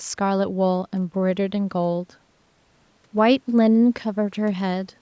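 No faults are audible in this speech; the call microphone processing behaves as expected, trimming the lowest bass and leaving nothing above 8 kHz.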